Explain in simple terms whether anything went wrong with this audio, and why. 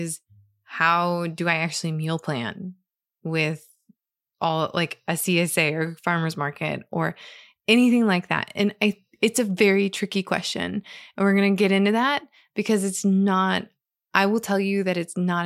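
Nothing went wrong here: the speech recording carries no technical faults that a listener would notice at any point.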